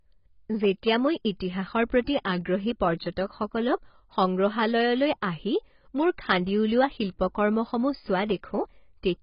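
From start to finish, the speech sounds dull and smeared, with a warbling, fizzy texture on sibilants. The likely cause is heavy AAC compression at a bitrate around 16 kbps. A spectrogram shows nothing above 5.1 kHz.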